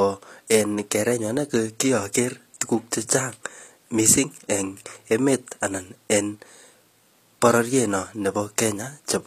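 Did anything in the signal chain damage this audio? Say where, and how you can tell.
Yes. HE-AAC compression runs throughout the speech: there is plainly audible codec damage, nothing above 14.9 kHz, and gritty, metallic treble on s sounds. The likely cause is a codec rebuilding the top band from copied lower bands, consistent with roughly 24 kbps.

Pre-echo appears at 3.07 s, just after "ane ko kiager tuguk". A short hiss, about 17 ms long, smears ahead of the next attack. The transform block spread its quantisation noise, sized for the loud onset, back into the quiet moment before it.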